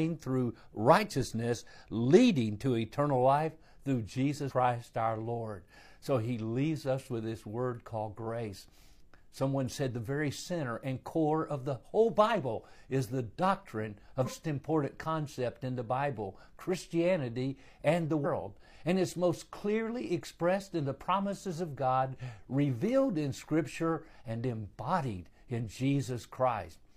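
At 4.46 to 4.52 s, after "to eternal life through", then 14.21 to 14.27 s and 18.21 to 18.26 s, damaged data in the compressed stream makes the decoder misread frames and hunt for the next valid header, producing short blips of about 55 to 60 ms each in the speech.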